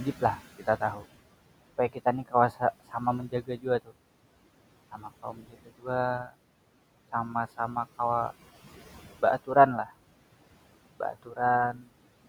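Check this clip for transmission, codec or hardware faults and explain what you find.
The trouble here is the noise suppressor, which shows up in two ways.

First, noise suppressor artifacts run through the whole clip. The room noise, sitting about 18 dB below the speech, gets pushed down by about 18 dB in the gaps and comes back under the speech as the suppressor opens up.

Second, there's speech cut by the noise suppressor at 0.57–1.05 s, 1.93–2.94 s, 3.29–3.93 s, 4.91–5.87 s, 11.13–11.38 s and 11.73–11.88 s. Quiet bits of speech were mistaken for noise and dropped along with it, by about 12 to 18 dB at worst, so short pieces sound swallowed or faint.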